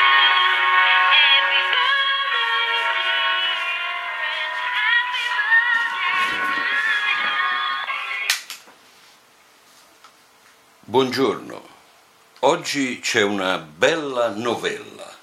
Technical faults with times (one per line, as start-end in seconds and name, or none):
none